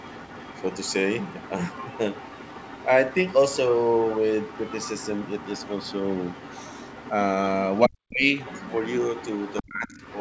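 From 0 to 7.11 s the other side's voice is leaking through at roughly 20 dB below the speech, likely residual loudspeaker echo the canceller missed. It returns briefly at 7.75 to 7.8 s. From 7.87 to 8.3 s the speech is suppressed in double talk, dipping by around 40 dB for a little under half a second, likely the canceller muting both sides at once. The leak resumes from 8.38 s to the end, louder at roughly 15 dB below the speech. Within it, at 9.62 to 10.01 s, another double-talk suppression pulls the speech down by about 25 dB.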